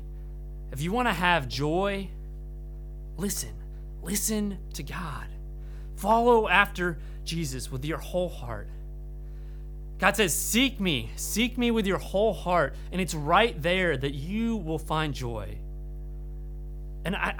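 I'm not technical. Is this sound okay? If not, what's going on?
No. A steady low hum at 50 Hz runs under the speech from start to finish: mains hum, where the power supply leaks into the recording. It's fairly loud and holds one fixed pitch, unlike hiss, which is a higher, airy rush.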